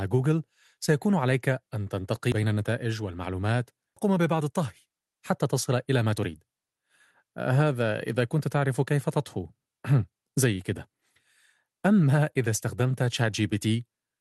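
At 2.32 s a small jump in the speech marks a dropped buffer (overrun), likely from about 40 ms of samples overwritten before being read.

At 3.96 s the speech skips ahead with no gap, losing roughly 0.7 s as a stretch was dropped while later audio was already waiting.

From 4.08 to 5.72 s the speech sounds hurried at unchanged pitch. This is a jitter buffer speed-up running at 109%, trimming pitch periods to shed about 150 ms of delay.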